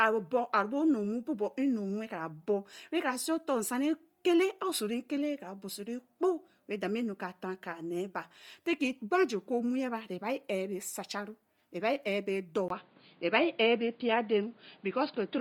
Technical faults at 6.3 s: Bluetooth LC3 compression

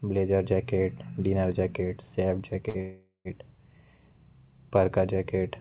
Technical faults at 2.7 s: short stall from a late packet

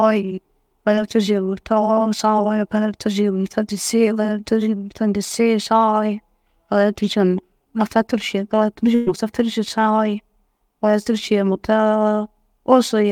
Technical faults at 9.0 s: burst of packet loss

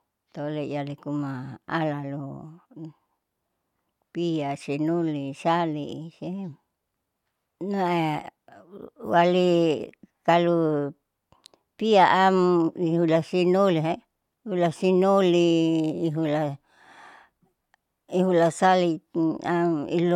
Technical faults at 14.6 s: none

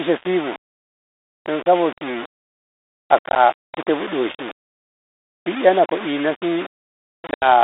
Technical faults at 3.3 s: low bit depth without dither; packet loss on an ADPCM call

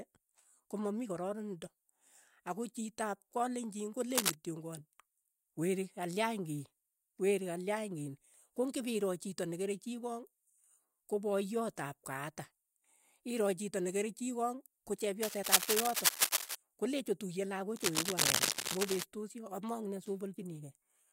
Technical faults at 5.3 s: none

